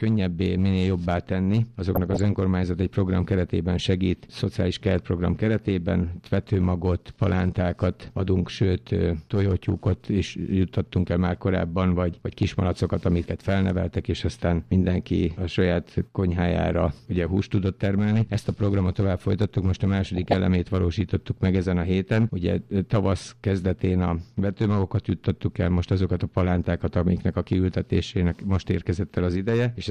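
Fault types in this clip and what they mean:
DAB burbling: bit errors surviving error correction corrupt MP2 sub-bands, giving brief blips of noise at 1.95 and 20.05 s, each lasting about 0.3 s.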